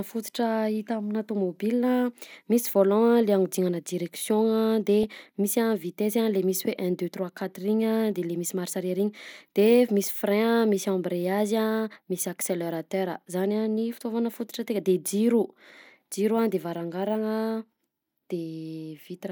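A speech clip with two brief bursts of burbling at 5.03 s and 13.97 to 14.02 s: DAB burbling, where residual bit errors from weak reception corrupt MP2 sub-band levels.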